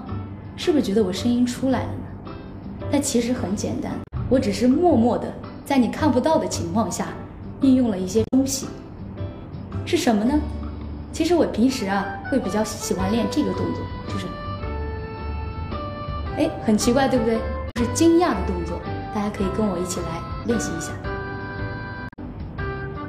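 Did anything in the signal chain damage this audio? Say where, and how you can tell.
Yes. Damaged data in the compressed stream, at the codec stage: short glitches at 4.04–4.13, 8.22–8.34, 17.67–17.77 and 22.06–22.19 s. The decoder misreads corrupt frames, then resyncs at the next header.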